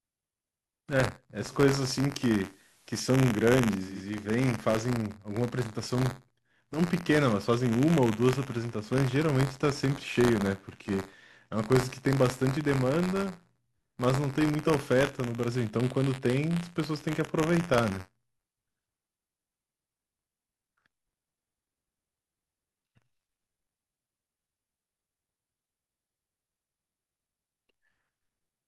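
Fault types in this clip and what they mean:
Buffer tearing: writer and reader have slipped, so a small slice of each period replays audio from a lap earlier, giving a steady 93.8 Hz rattle that fits a 512-sample buffer.
Digital radio blending to analogue: from 1.37 to 4.04 s the radio falls back to FM with a 199 ms cross-fade, bringing hiss and about a 1 dB level shift.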